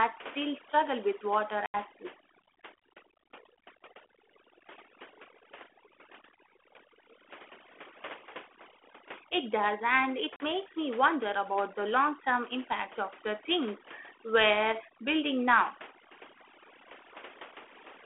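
Overdone noise removal runs through the whole speech clip. The noise reduction was set so aggressively that frequency bands close to its noise estimate are pulled almost to nothing, and the softer parts of the voice are removed along with the noise. Between phrases the background drops and breaks up into twinkling specks. It sits on a telephone-band ADPCM path, 300 Hz to 3.4 kHz, whose light coding grain fits 32 kbit/s G.726.

At 1.66 s there is packet loss on an ADPCM call. An 80 ms hole, about a few packets' worth, ends abruptly at 1.76 s. Because the decoder's adaptive predictor and step size have drifted from the sender's, the speech comes back slightly distorted before settling. At 10.36 s a shorter 40 ms gap, roughly a couple of packets, does the same on a smaller scale.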